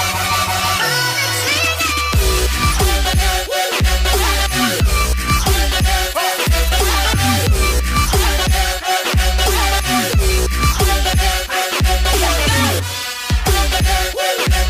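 No technical fault can be heard anywhere in this audio. There is nothing here to place at a time or trace to a cause.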